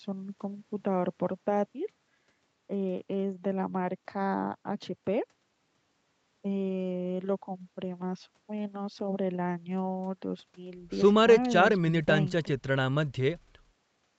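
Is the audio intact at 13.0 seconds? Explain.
Yes, the speech is intact at 13.0 seconds, with only the ordinary band limit of the call path, which leaves nothing above 8 kHz.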